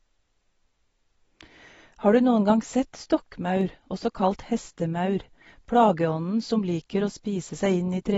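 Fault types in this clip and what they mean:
AAC compression: The speech sounds dull and smeared throughout, with a fizzy, warbling edge on sibilants. This is likely low-bitrate AAC-LC coding quantising the spectrum coarsely and lowering the cut-off, which fits a rate near 24 kbps.
dropped samples: A single sharp click at 3.61 s, showing as a thin vertical line across the spectrum. The likely cause is a fraction of a millisecond of samples missing, so the waveform jumps abruptly from one value to a later one.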